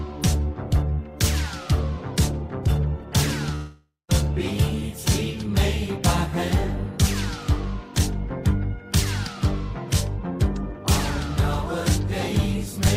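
At 3.55 s the audio stops carrying new material and, until 4.12 s, the last sound is drawn out as a continuing tone that fades, including a stretch of about 200 ms of silence, before the signal resumes. This is likely a long network dropout: packets stopped arriving, the receiver concealed the gap by extending what it last had for roughly half a second, and about 540 ms of the original audio was never played, so playback picks up further along.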